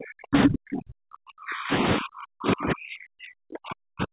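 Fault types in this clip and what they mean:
Speech suppressed in double talk: speech dips throughout the clip, at worst by around 40 dB, likely an echo canceller attenuating both talkers during overlap.
Other side's voice leaking through: a brief second voice at 0.43–0.47 s, at roughly speech level, likely loudspeaker echo the canceller failed to remove.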